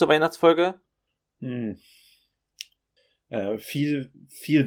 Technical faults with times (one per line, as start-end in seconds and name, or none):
none